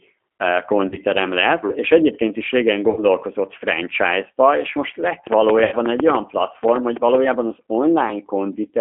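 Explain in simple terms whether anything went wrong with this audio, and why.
A few things went wrong. The whole clip went through the G.729 codec, a low-rate phone codec that rebuilds speech from a simple model, so it sounds thin, narrow and a bit rough and synthetic.

There's also VoIP packet loss concealed by the speech codec at 0.88–0.97 s, 2.90–3.04 s and 5.64–5.75 s. Chunks of audio went missing, and the decoder papered over each gap with a stretched-out, fading sound. The speech stays a little off for a moment after each gap.

From 5.27 to 7.16 s there's a train of clicks: about fifteen ticks, roughly six a second at an uneven pace, audible in pauses too. The likely cause is electrical interference from nearby equipment or a faulty connection or power supply.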